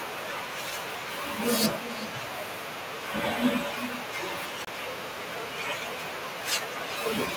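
From the first second to the last, the speech carries an echo with no canceller. Each phrase returns roughly 0.4 s later, about 14 dB quieter than the original. The copy sounds thinner. The far end is playing the call through a loudspeaker. Its microphone picks that sound up again. Nothing strips it out before it travels back. So every phrase trails a faint shadow of itself.

At 4.65 s the sound drops out completely. The gap is brief, about 25 ms, and ends at 4.67 s. Then the speech resumes. This is likely a Bluetooth stall. Radio interference delayed the audio packets. The headphones' buffer ran empty. Playback paused until the missing data arrived.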